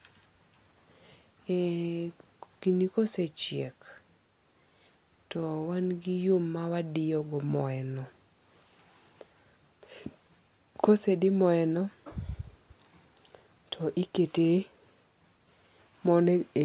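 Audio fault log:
The speech comes through a WebRTC call path coded as G.711 A-law at 64 kbps, so its content stops at 4 kHz, and no fault can be heard in it.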